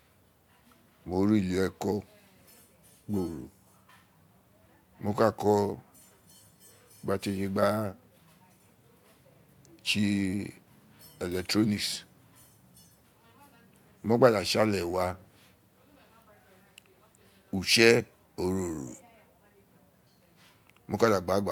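No technical faults are audible anywhere in the speech recording.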